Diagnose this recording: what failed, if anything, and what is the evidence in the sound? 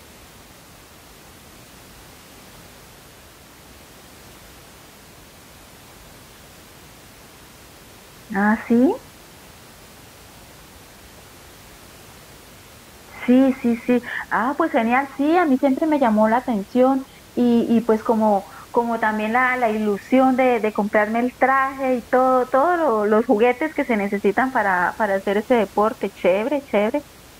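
Nothing failed; the room noise sits about 26 dB below speech.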